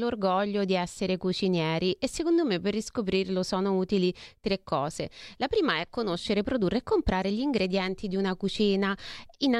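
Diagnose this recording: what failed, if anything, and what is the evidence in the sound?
Nothing failed; no faults heard.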